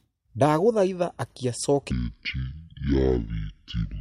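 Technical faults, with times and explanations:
1.91–4.01 s, section at the wrong speed: from 1.91 s to the end, the speech plays at about 0.56 times its proper rate, so it drags and drops roughly ten semitones, turning deep and sluggish. The likely cause is this stretch being fitted to the wrong clock during editing or playback. On a spectrogram, harmonics and formants shift abruptly downward and syllables stretch wider; the waveform shows broader, slower cycles and elongated envelopes.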